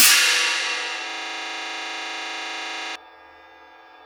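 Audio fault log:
1.10–2.96 s, system hang loop: the system froze while the audio hardware kept replaying the same 40 ms slice of its buffer, dozens of times over. That exact repeat at 25 per second gives a rough, buzzy stutter until things recover.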